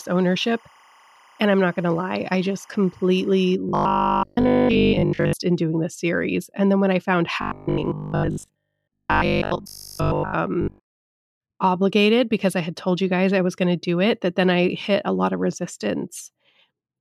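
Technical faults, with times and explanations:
0.0–3.55 s: timecode bleed, a steady chirping warble about 30 dB below the speech, as 25-frame linear timecode leaks in, switching between 1 kHz and 2 kHz.
3.69–5.33 s, 7.42–10.36 s and 10.62–11.16 s: robotic sound from repeated short buffers, a rigid metallic 50 Hz buzz on the speech, likely from 20 ms chunks replayed while most new audio is skipped.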